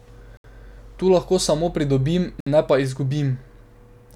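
At 0.37 s the speech drops to silence for about 70 ms, then resumes at 0.44 s. A second gap runs from 2.40 s to 2.47 s, lasting about 61 ms, and the speech returns on "ne pa". Both are likely Bluetooth stalls. Radio interference delayed the packets, so the headphones' buffer emptied and playback halted until the resent data arrived. Each cut is abrupt and clean, with no fade.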